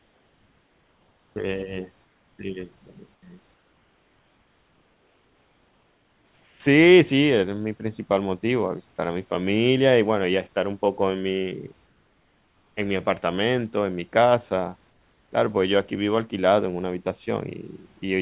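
From 0.0 to 1.36 s, 2.04 to 2.38 s, 3.14 to 3.22 s, 3.54 to 6.6 s, 11.86 to 12.76 s and 14.9 to 15.32 s, the pauses between speech hold comfort noise in place of the background. The real room noise gives way to a steady, featureless hiss about 2 to 4 dB quieter, which is likely the receiver synthesising noise while the sender stopped transmitting. On a spectrogram these stretches show as smooth, uniform bands with none of the texture around them, ending like the rest of the call at 4 kHz. On the waveform they are flat, even-amplitude blocks.

From 18.00 to 18.02 s, a bit of sound is dropped by the voice detector. About 10 ms of speech is lost and replaced by the same flat noise, likely because the detector mistook quiet speech for background. It sounds like the speech briefly giving way to steady noise. A spectrogram shows the speech energy cut off sharply into even noise, and the waveform shows the speech truncated into a low, level band.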